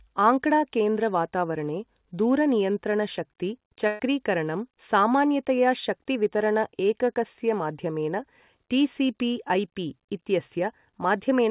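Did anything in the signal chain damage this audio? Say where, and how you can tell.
Yes: a burst of packet loss in the network stage, 3.87 to 4.0 s, just after "केन्द्र वातावरणे दूरनियन्त्रण शक्ति". About 120 ms of audio is missing, bridged by a fading continuation of the last sound.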